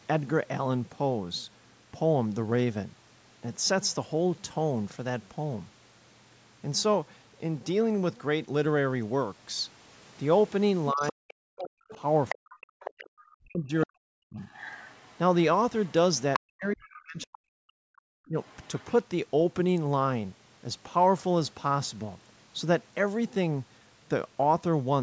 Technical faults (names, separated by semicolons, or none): speech suppressed in double talk; other side's voice leaking through; background gated by the echo canceller